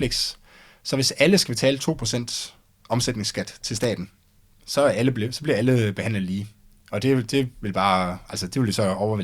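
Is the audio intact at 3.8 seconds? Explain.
No. Loose connector crackle runs from 3.77 to 3.85 s, just after "omsætningsskat til". A worn contact chops the signal, giving a brief irregular scratchy burst.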